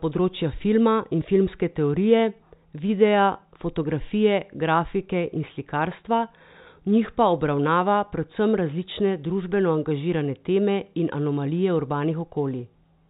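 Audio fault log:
Nothing to log here: the speech comes down an ordinary G.711 telephone line, with the familiar narrow phone-band sound topping out at 4 kHz, and nothing in it goes wrong.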